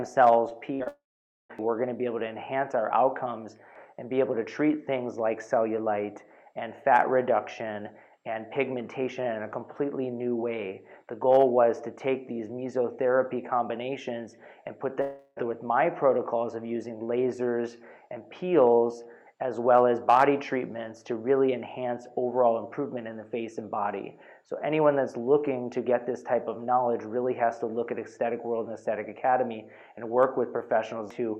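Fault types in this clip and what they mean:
short concealed packet loss: Around 0.49 and 0.84 s, about 20 ms of audio didn't arrive, and the receiver patched it by continuing the previous sound, leaving a quick smear.
burst of packet loss: From 0.75 to 0.82 s a few packets in a row went missing; the last sound is stretched and faded over the hole, then the audio jumps ahead.
long network dropout: Likely a network outage. From 0.88 to 1.51 s the last sound trails off into about half a second of silence, and from 15.01 to 15.38 s it's mostly a fading continuation.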